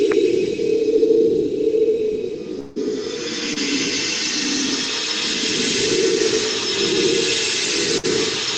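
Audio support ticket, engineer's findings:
Long network dropout, 2.59 to 2.78 s. The music breaks off and the last sound is carried on as a fading buzz or hiss for about 160 ms, with no dead silence. About 140 ms of the music never returns. Playback resumes further along, with timing shifted by around 20 ms. Likely cause is a network stall upstream of the jitter buffer, with the receiver extrapolating until packets arrive again.

Short concealed packet loss, 3.54 to 3.58 s. A brief smear in the music, a wobble lasting about 22 ms before it blends back in. About 20 ms of real audio is missing. The component is the decoder's loss concealment. A packet arrived too late or not at all, so the decoder extended the preceding waveform to cover the hole, then crossfaded into the next packet that arrived.

Burst of packet loss, 7.98 to 8.05 s. The music turns into a held buzz or fading hiss for about 55 ms, then jumps ahead. 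About 60 ms of content is lost. The component is the receiver's concealment stage. Several consecutive packets were dropped or arrived too late. The decoder repeated the last sound and lowered its level as the gap grew, then resumed at a later point.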